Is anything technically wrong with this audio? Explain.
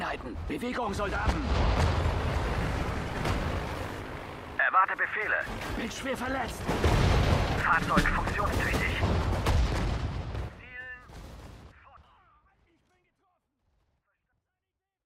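No, nothing here is wrong, and the level easing down from around 9 seconds to the very end at 15.1 s is just a deliberate smooth fade-out rather than a fault.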